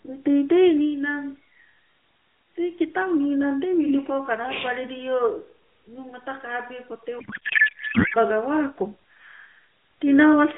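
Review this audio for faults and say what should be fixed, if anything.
From 7.20 to 8.16 s the speech turns into garbled noise and warble that barely tracks it. This is a codec payload misread: octet-aligned AMR frames decoded as bandwidth-efficient, putting every field in the wrong place. To prevent it, make both ends negotiate and confirm the same AMR payload format before sending media.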